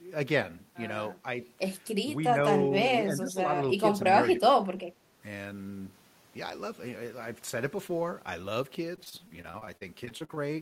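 A speech recording with two separate problems. At 3.12–3.51 s, 4.36–4.42 s and 4.59–4.78 s the voice dips, by about 10 dB in the first stretch and about 15 dB in the later two. These dips are likely speech suppressed in double talk, where an echo canceller facing simultaneous talk from both ends cannot tell the near voice from loudspeaker echo and attenuates everything. On a waveform the envelope sags abruptly in these windows. From 8.95 to 10.38 s there is repeated packet loss with a robotic sound: fourteen short dropouts, the longest 42 ms. Some holes are patched by extending the preceding sound and others are simply missing, so about a fifth of that span is concealment. It sounds choppy. A spectrogram shows smeared, frozen harmonic slices and thin vertical gaps, and the waveform shows repeated, looped-looking fragments.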